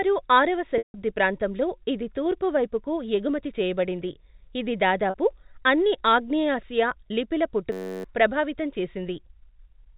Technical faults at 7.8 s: system hang loop

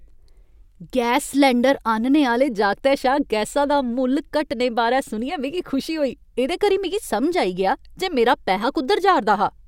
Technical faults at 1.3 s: none

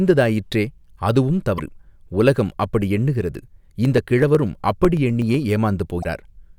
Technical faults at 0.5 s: none

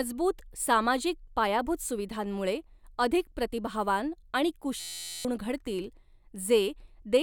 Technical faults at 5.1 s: system hang loop

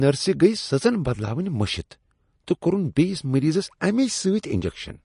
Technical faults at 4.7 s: MP3 compression

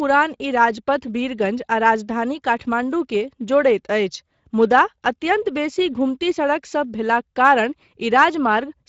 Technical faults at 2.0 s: Speex codec

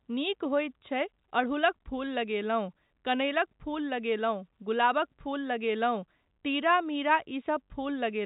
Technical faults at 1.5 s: none

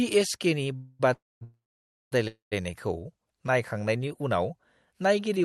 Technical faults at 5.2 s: none

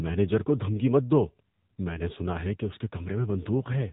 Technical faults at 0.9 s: AMR narrowband mobile codec

